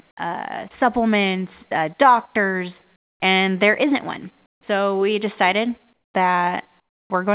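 Comfort noise in place of the background appears in four pauses: 2.96 to 3.2 s after "uh supplements uh doctors", 4.46 to 4.61 s after "and there isn't one", 5.93 to 6.14 s after "we decided", and 6.8 to 7.1 s. Each gap, 150 to 300 ms long, drops about 15 to 23 dB into a flat, featureless hiss, likely because discontinuous transmission halted the audio and the receiver synthesised noise. Throughout, the band stops at 4 kHz, which points to a G.711 narrowband call path.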